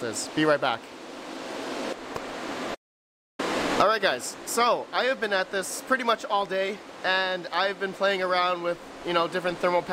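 The input feed was likely interrupted for a moment, through a dropped connection, a failing link or a brief mute, while the recorder kept writing silence. The result is an audio dropout to silence from 2.75 to 3.39 s: the sound stops abruptly, leaving about 640 ms of silence with no room tone or background beneath it, then resumes mid-flow. Whatever occurred during that gap is missing from the recording.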